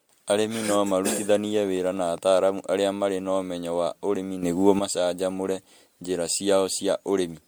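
Generation loss runs through this whole speech clip: the sound is swirly, smeared and hollow, with blurred consonant attacks, more damaged than a single encode near 100 kbit/s would leave, and with nothing above 20.1 kHz. The likely cause is repeated lossy MP3 coding, decoded and re-encoded around seven times at roughly 101 to 104 kbit/s. Each pass requantises on a shifted frame grid, so noise and spectral holes build up.

A train of clicks runs from 1.57 to 2.60 s, ending just before "arĩa marĩ na ũmenyo". About ten near-identical pulses tick over the speech at a steady 9.8 per second, and they peak at about the same level as the voice. The regular spacing and uniform shape point to a likely source in electrical interference from nearby equipment or a faulty connection or power supply.

A sudden gain jump begins at 4.43 s, right after "na ũmenyo wa ũrĩmi". Voice and background noise step up together by 8 dB and hold there until 4.79 s, just before "macanjamũre njĩra". 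The abrupt step, with no fade, likely comes from a digital gain setting being applied instantly from one sample to the next rather than ramped.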